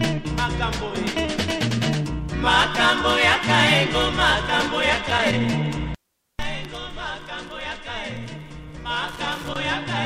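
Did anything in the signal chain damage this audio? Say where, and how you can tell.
Yes, in the analogue wiring. Loose connector crackle appears from 4.9 to 5.33 s and again from 9.06 to 9.56 s. Each burst is an irregular scratching. A worn or dirty contact is making and breaking, chopping the signal.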